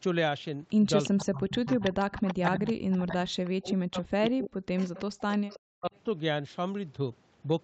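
An echo leak, likely from a far-end loudspeaker whose echo canceller let some pickup through, returns a copy of the speech 334 ms late at about 10 dB below it from 1.03 to 1.1 s. It returns again from 1.67 to 2.35 s. Speech suppressed in double talk, likely the canceller turning down both sides when it could not separate them, dips the voice by up to about 30 dB across roughly half a second between 1.12 and 1.95 s. The same suppression returns more heavily from 2.39 to 5.92 s, cutting the voice by up to about 40 dB for around three seconds in total. Within that stretch the 334 ms echo recurs faintly, about 20 dB down from 2.67 to 3.31 s, about 15 dB down from 4.25 to 4.3 s, and about 20 dB down from 4.78 to 5.57 s.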